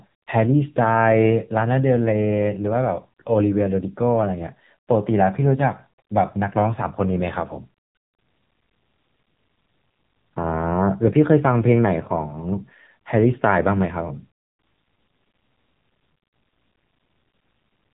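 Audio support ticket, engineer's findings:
AMR narrowband mobile codec, whole clip. Speech sounds buzzy and synthetic, nothing above about 3.8 kHz. Phone-call audio: a vocal-tract model rebuilds each 20 ms frame from a few pulses, and the damage is plainly audible, which fits a low AMR-NB mode around 7.4 kbps. Worth checking the mobile leg of the chain.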